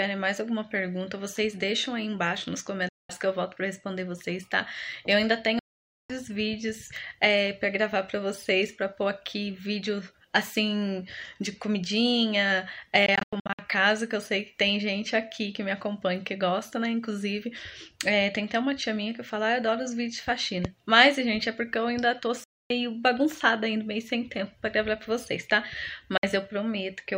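The sound cuts to silence at 2.89–3.10, 5.59–6.10, 13.06–13.59 (several short gaps), 22.44–22.70 and 26.17–26.23 s, then resumes further on. These are likely Bluetooth dropouts, showing as sharp-edged blank columns on a spectrogram and flat lines in the waveform.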